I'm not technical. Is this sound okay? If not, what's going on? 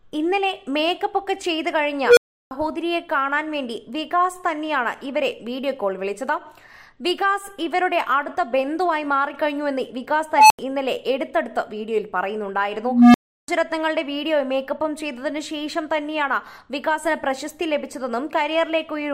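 No. Unstable filter at 2.06–2.51 s, 10.34–10.59 s and 12.84–13.48 s: a runaway filter swells a tone into a loud squeal, then briefly cuts to silence.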